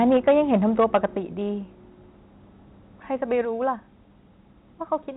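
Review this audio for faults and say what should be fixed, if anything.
Microphone overload runs from 0.03 to 0.97 s. The loudest peaks are flattened against the converter's ceiling, with the signal pushing about 6 dB past full scale and a few percent of samples clipped. That gives the opening second a harsh, crackly edge on its strongest syllables. The likely cause is an input level set too high at the microphone or interface, so the tops of the waveform are cut off before the audio ever reaches the call path. To prevent it, set the input gain so that the loudest speech peaks sit several decibels below full scale.

Microphone volume stepped down occurs at 0.17 s (about 3 dB), 1.17 s (about 6 dB) and 3.45 s (about 3 dB). Each time, the voice and the background drop together in a single abrupt step rather than a smooth fade. The first two fall inside or just after the clipped stretch. That pattern likely comes from the call software's automatic gain control reacting to the overload by cutting the device's input volume. 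To prevent it, disable automatic microphone level adjustment and fix the input gain manually at a safe level.

The G.711 telephone coding carrying the audio limits the bandwidth to below 4 kHz, and it contributes no audible damage of its own.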